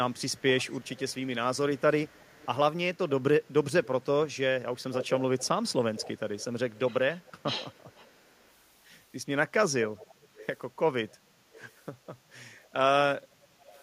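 A loudspeaker on one side was likely feeding back into its microphone, with the echo canceller failing to remove it, so an echo leak sends a copy of the speech back about 334 ms late. From 0.14 to 8.5 s the echo trails, well below the direct speech. It returns briefly at 9.98 to 10.47 s and 11.52 to 11.72 s, then again from 13.75 s to the end, fainter, at about -25 dB and then -30 dB, a ghost behind the speech.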